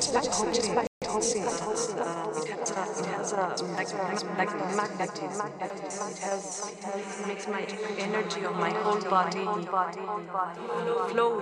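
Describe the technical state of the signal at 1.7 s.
At 1.7 s the player is in a time-compressed catch-up, running from 1.02 to 2.00 s: after a stall it trims its backlog by dropping small slices and cross-fading the joins, playing about 1.15 times fast, so the sound hurries at unchanged pitch.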